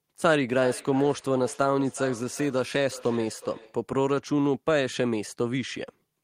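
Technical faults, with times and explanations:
0.54 to 3.83 s, feedback echo between two devices: speech returns roughly every 0.4 s, thinner and ringing, peaking about 16 dB below the voice, as a second device replays its microphone's pickup.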